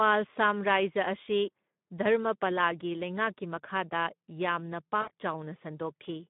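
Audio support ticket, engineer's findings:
Speex codec, whole clip: speech hoarse, noisy, plainly coded. Sharp band edges near 150 Hz and 3.6 kHz in the spectrogram, with smeared, grainy harmonics. Too few excitation bits in CELP, consistent with roughly 11 kbps.

VoIP packet loss concealed by the speech codec, 5.01 to 5.10 s: a 60 ms stretched patch that fades, fitting about three lost 20 ms frames. Waveform shows a decaying, stretched segment. Decoder extrapolating from its last pitch and filter.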